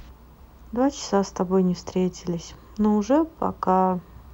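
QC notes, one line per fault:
throughout video or display buzz: 50 Hz field-rate buzz with hash above it and a 15.6 kHz line tone, roughly 40 dB under the speech. On a spectrogram it shows as steady horizontal lines at 50 Hz harmonics and 15.6 kHz.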